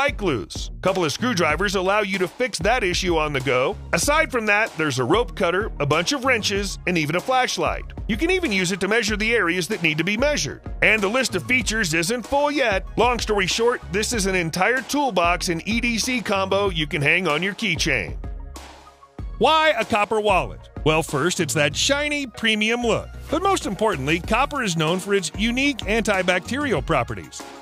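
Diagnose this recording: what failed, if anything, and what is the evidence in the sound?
Nothing in the chain seems to have failed here; I listened for trouble at every stage and came away with nothing to report.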